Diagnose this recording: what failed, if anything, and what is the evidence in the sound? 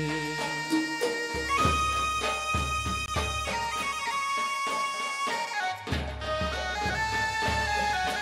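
The playback or capture buffer let you down here: there's a block of digital silence from 3.06 to 3.08 s, a clean 20 ms hole. The audio drops straight to silence and comes back with no fade, and at that length it reads as a brief dropout rather than a single tick. That pattern points to the driver or buffer stage missing its deadline and handing out an unfilled block of zeros.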